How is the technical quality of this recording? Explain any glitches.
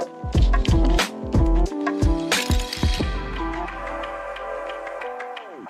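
Nothing stood out on listening; no glitches were heard anywhere in the recording.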